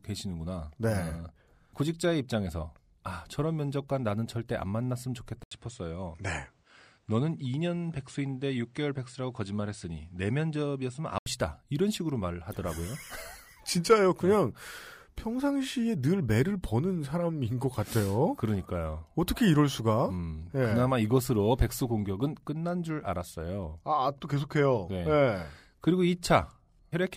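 From 5.43 to 11.26 s, after an 80 ms silence, the speech dulls with nothing above 9.7 kHz and a new noise floor, likely an input switched to a poorer device.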